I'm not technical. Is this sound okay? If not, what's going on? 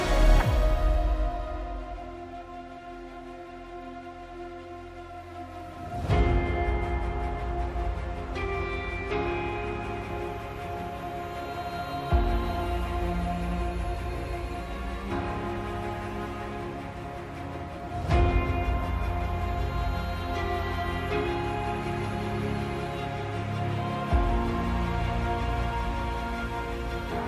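Yes, the signal holds steady the whole way, with no dropouts, breaks or level problems to worry about.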